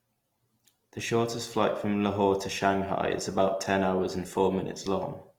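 Throughout, the speech sounds grainy and rough, likely from Opus compression at a rate near 24 kbps. On a spectrogram, the full-width upper bands look noisy and speckled.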